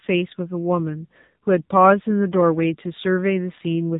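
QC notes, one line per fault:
Throughout, AMR narrowband mobile codec: nothing passes above 3.8 kHz. Heavy coding leaves speech buzzy and synthetic, which fits a low rate near 6.7 kbps.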